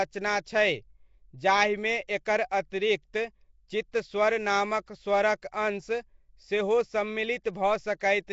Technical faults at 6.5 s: Nellymoser compression

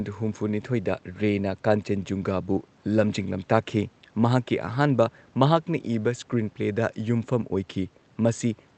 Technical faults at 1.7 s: none

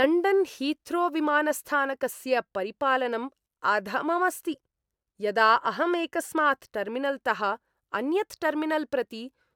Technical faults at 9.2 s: none

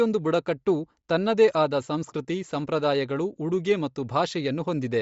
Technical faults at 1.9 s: Bluetooth LC3 compression

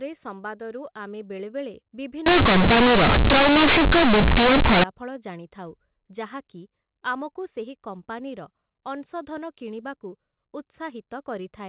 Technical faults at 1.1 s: none

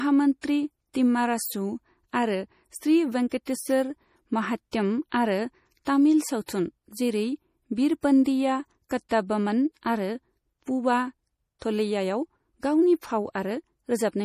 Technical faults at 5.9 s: MP3 compression; pre-echo

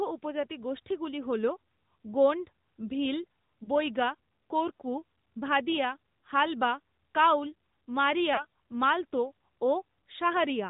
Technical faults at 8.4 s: AMR narrowband mobile codec; lost AMR speech frames

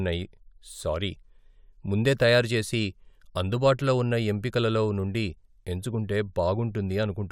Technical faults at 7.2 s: none

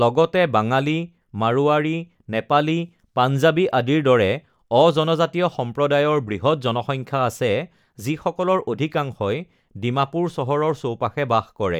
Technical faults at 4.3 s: dropped samples

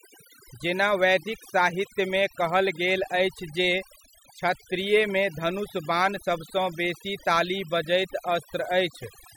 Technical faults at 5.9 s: overdone noise removal

